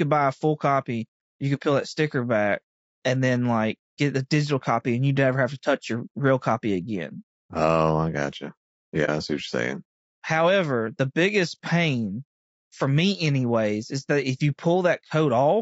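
Low-delay AAC compression runs from start to finish and is plainly audible. The speech sounds rough and grainy, with a hiss filling the spaces between the pitch harmonics and a top band that sounds thin and synthetic. The likely cause is AAC-ELD coding at a rate that fits about 32 kbps. Its short frames capture the voice's harmonic structure poorly, so the coder runs out of bits and fills the gaps with noise.

AAC frame loss with muting occurs from 9.05 to 9.09 s. The speech fades into a brief dip about 40 ms long and fades back in. The decoder had nothing to play for that stretch and set its spectrum to zero. The overlapping transform windows then smooth the gap at both edges. Its length points to a single lost frame.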